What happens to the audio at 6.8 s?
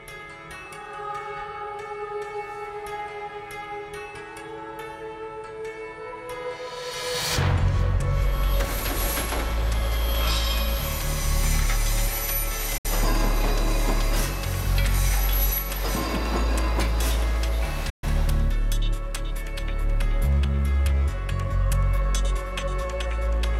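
Nothing goes wrong at 6.8 s; the audio plays through that moment intact, with no dropout, click or other technical fault.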